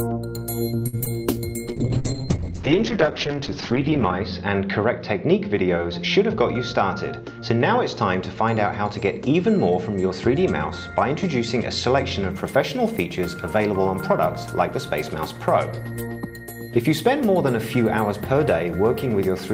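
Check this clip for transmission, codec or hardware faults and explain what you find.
There are five separate transmission faults here, all bunched into the first 12 seconds or so.

At 0.87 to 0.95 s there's a short stall from a late packet. The packet missed its slot, the jitter buffer ran dry, and the receiver stretched the last sound for about 58 ms until it turned up. Nothing is lost, but that moment hangs slightly with a slight buzz or dip, and everything after it sits 58 ms later.

Right after that, at 0.99 to 1.02 s and 1.04 to 1.08 s, come two bits of short concealed packet loss. Each dropped about 20 ms, and the decoder patched the gaps by extending the preceding sound. You hear a quick smear or wobble twice in a row instead of clean audio.

From 1.67 to 12.37 s there's a call bitrate drop. The bandwidth estimate fell, so the encoder went from 32 kbps down to 8 kbps, and the audio band shrank from 20 kHz to 8 kHz. 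It sounds muffled and a bit rough, bottoming out for about 2.5 s before the bitrate climbs back.

Inside that stretch, at 6.58 to 7.57 s, there's a jitter buffer speed-up. The buffer had built up extra delay, so the receiver trimmed out tiny pitch-period slices, about 70 ms in total. Playback runs around 6% fast at unchanged pitch, which gives that second a slightly hurried feel.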